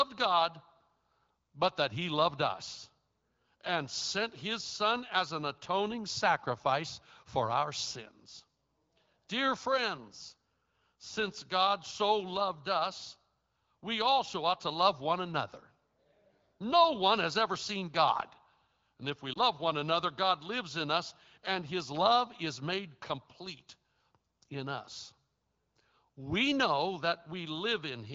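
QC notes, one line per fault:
19.33–19.38 s, lost AMR speech frame: between "if we" and "one another", radio errors made a speech frame fail its checksum, and the AMR-WB decoder concealed it by reusing the last good pitch and vocal tract settings at reduced gain. The result is a brief dip or warble lasting about the length of one 20 ms frame. The decoder recovers almost at once, and the HD Voice wideband sound around it stays clear.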